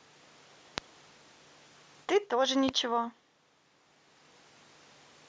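A loud pop at 0.78 to 0.80 s and a second at 2.69 to 2.71 s each strike as a single sharp crack over the speech, which carries on underneath. The first peaks about 20 dB above the speech, the second about 15 dB. Each is likely a brief voltage spike, from a switch, a plug contact, static or a driver glitch, added to the signal and shaped by the circuitry after it into a hard transient.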